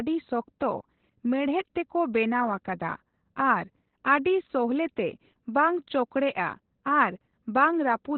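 From start to finish the speech sounds muffled and boxed-in, with a hoarse, slightly robotic grain on every syllable. Nothing reaches above about 4.2 kHz, so sibilants and breath lose their edge. This is heavy Opus voice compression. The codec has fallen back to narrowband SILK, its linear-prediction speech coder, and models the voice's excitation only coarsely. That combination strips the upper band and roughens the tone, which fits a bitrate near 8 kb/s.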